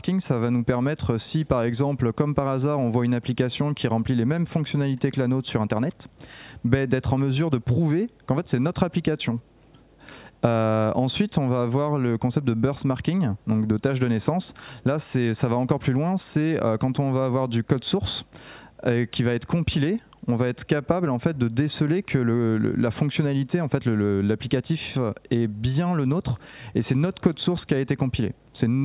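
No technical fault can be heard anywhere in this audio. There is no point in the clip that calls for a closer listen.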